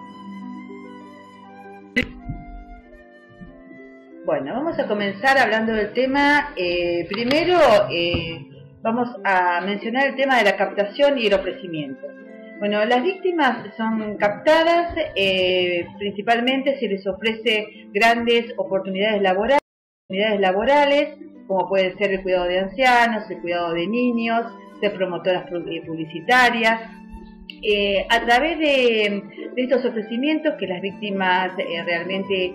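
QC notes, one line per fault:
19.59–20.77 s, stream reconnect: the audio drops to silence for 510 ms, then resumes 673 ms earlier and repeats a short stretch, its first instant muted or faded in. The connection broke, the player reconnected, and a fresh decoder started from a resent burst.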